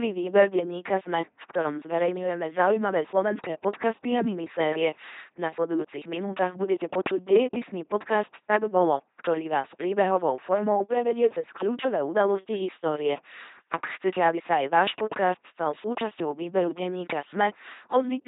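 From start to finish the speech passes through an LPC-10 vocoder, with heavy damage consistent with the 2.4 kbit/s LPC-10 rate. Each frame is rebuilt by a ten-pole filter fed either a pulse train or noise, so the voice sounds buzzy and robotic, with hiss where voicing is misjudged. On a spectrogram, harmonics form a rigid comb under smoothed formants, noisy frames switch abruptly, and nothing appears above 3.8 kHz. The waveform shows regular spiky pulses.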